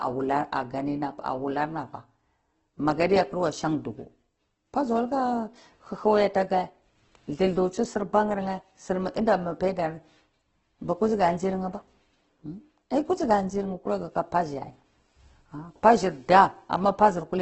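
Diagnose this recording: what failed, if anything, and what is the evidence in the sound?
The fault sits at the codec stage and lasts the whole clip. The speech sounds rough, grainy and noisy, and nothing reaches above 8.2 kHz. That is likely Opus compression in its CELT mode, starved of bits, which fits a rate near 12 kbps.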